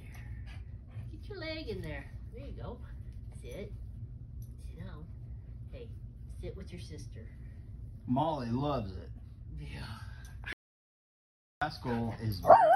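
Near the end, the sound cuts out dead at 10.53 s and doesn't come back until 11.62 s, so about 1.09 s is gone. It's an audio dropout to silence: plain silence with no room tone, most likely the input briefly disconnecting while the recorder kept writing.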